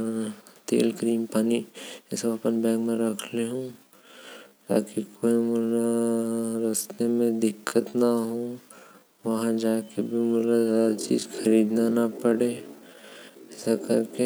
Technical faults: time-stretched section

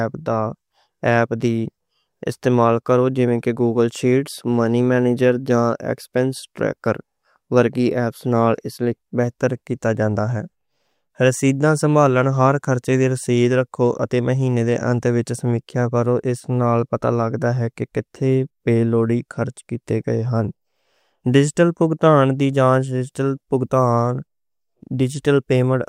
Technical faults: none

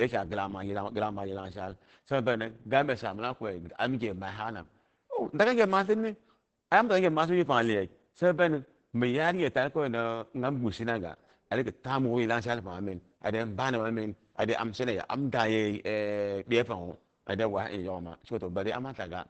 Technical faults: Opus voice compression

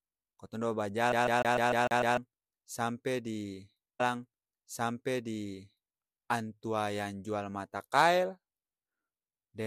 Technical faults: CD stuck on one turn; stream segment repeated

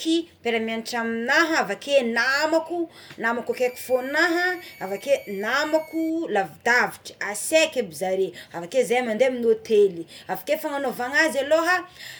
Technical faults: switching supply whistle

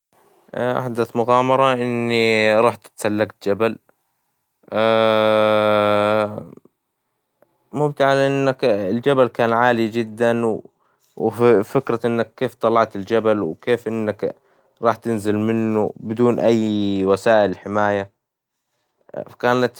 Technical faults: clock drift between sender and receiver; repeated timing corrections

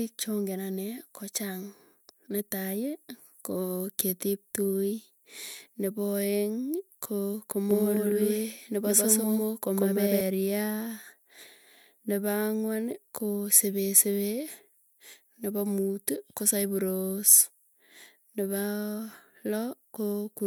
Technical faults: doubled audio track

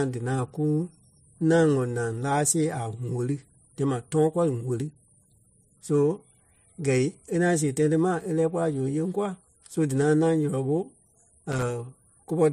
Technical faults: loose connector crackle

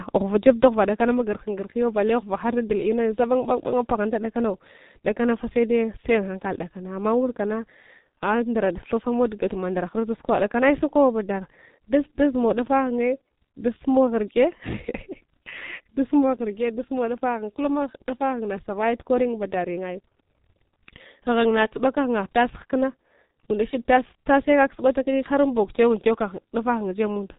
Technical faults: G.723.1 codec

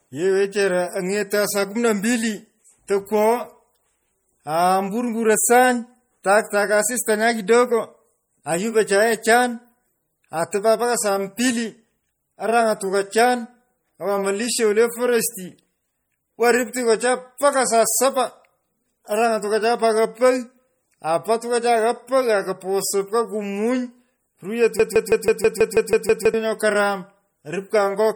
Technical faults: MP3 compression; broken-record loop

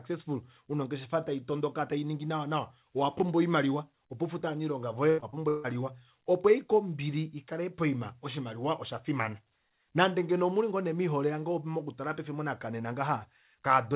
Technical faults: repeated packet loss (robotic sound)

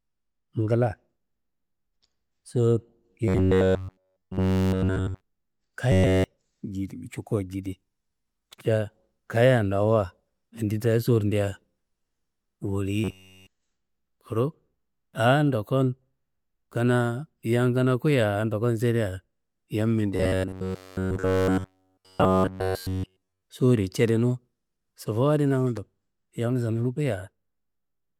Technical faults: robotic sound from repeated short buffers

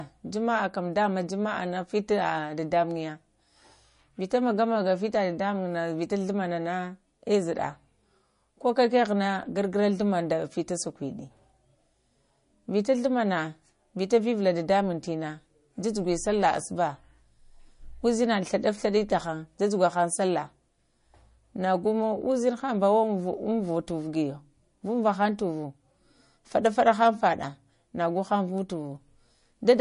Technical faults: MP3 compression

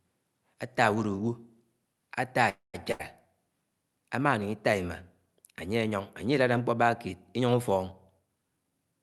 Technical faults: call audio freeze; burst of packet loss; jitter buffer speed-up

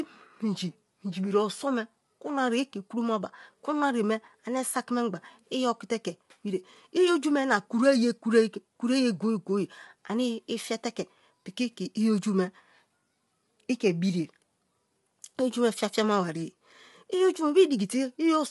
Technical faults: low-delay AAC compression

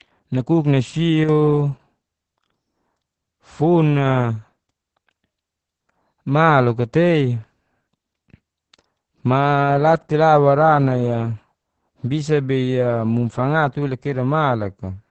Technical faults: Opus voice compression

